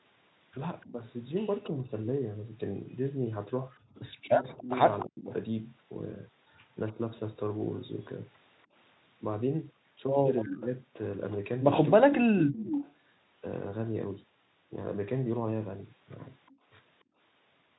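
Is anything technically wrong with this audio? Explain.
Yes. The call audio has three kinds of echo-canceller trouble.

Speech suppressed in double talk, 0.85 to 6.97 s and 10.44 to 12.82 s. The voice dips in pieces, about a second in total within each span. Drops reach roughly 25 dB, then roughly 40 dB. Both sides were likely talking at once, so the canceller turned everything down.

Echo leak, 1.64 to 5.33 s, 10.36 to 12.92 s, and a brief scrap at 16.48 to 16.56 s. A copy of the voice trails about 0.29 s behind. It sits about 15 dB, then about 10 dB, below the speech, and the last scrap is about 40 dB down. A loudspeaker echo likely slipped past the canceller.

Background gated by the echo canceller, 3.80 to 3.95 s and 17.04 to 17.18 s. The room sound drops out for about 0.15 s each time, by about 14 dB and then about 22 dB. The canceller clamped the microphone while the loudspeaker played. 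It let go right after.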